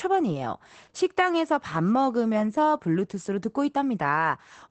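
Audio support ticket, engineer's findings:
Opus voice compression, whole speech clip. Muffled, hoarse, slightly robotic timbre; damage plainly audible. Spectrogram: hard ceiling near 8.7 kHz, nothing above. SILK wideband mode, coarse excitation coding; sound fits roughly 12 kbps, 20 ms frames.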